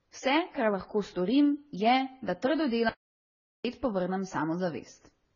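From the start and throughout, the speech carries the marks of transcoding between lossy codecs. Nothing is present above 7 kHz, so the top end sounds dull and boxed-in. Layered on that are two distinct kinds of coding damage, heard together. The combination points to a very low-rate AAC-LC encode, around 16 kbit/s, that was then likely re-encoded to Vorbis at roughly 25 kbit/s. The second codec cannot restore the lost band and adds its own artefacts on top of the first.

At 2.89 s the speech cuts off mid-flow in an audio dropout to silence, and it resumes at 3.65 s, a gap of about 0.76 s. The gap is silent, with no room tone or background noise underneath, which likely means the input was lost while the recorder kept writing silence. Whatever was spoken in that stretch is missing.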